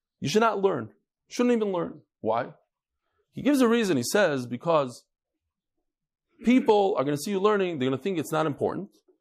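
From start to finish the speech carries plainly audible MP3 compression damage, likely from an encode starved of bits, which fits a rate of about 64 kbps. With too few bits, the encoder drops the treble and blanks weak frequency lines that flicker between frames, so the sound turns watery and swirling, s sounds chirp metallically, and consonant attacks blur. A spectrogram shows a flat ceiling where the highs stop and scattered holes in the upper bands.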